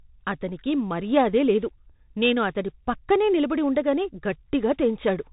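Across the whole clip the speech carries the signature of the Bluetooth CVSD headset codec. Nothing passes above about 3.8 kHz, and the damage is plainly audible. Each sample is coded as a single up-or-down step whose size adapts, which fits a 64 kbps CVSD stream. Sibilants turn scratchy, loud bright moments overshoot into distortion, and a granular hiss sits beneath everything. Plain band-limiting would sound muffled but clean, and it is that grainy slope-overload texture that sets this apart.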